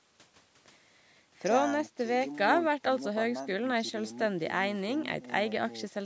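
No faults are present in this speech clip; it has passed through ordinary call microphone processing, which trims the lowest bass with a high-pass filter and leaves nothing above 8 kHz, both normal for that path.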